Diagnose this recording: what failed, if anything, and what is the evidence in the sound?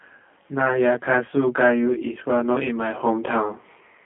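Rough, slightly doubled speech throughout points to channel delay (comb filtering): one channel arrives roughly 20 ms late and is summed to mono, notching from about 20 Hz upward.

The speech is rough and synthetic-sounding throughout, held to about 150 Hz to 3.4 kHz with nothing above 3.6 kHz. This is G.729 codec damage, consistent with 8 kbit/s VoIP coding.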